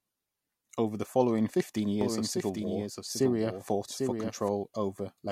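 A doubled audio track runs from 2.01 to 4.49 s in this speech clip: a second, full-band copy trails the original by roughly 0.7 s at around 5 dB lower, with no decay or room colour, and cuts in and out abruptly, likely from a slower second capture path.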